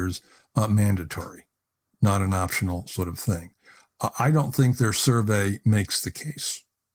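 No technical faults can be heard anywhere in this speech recording, which comes through Opus voice compression at 20 kbps.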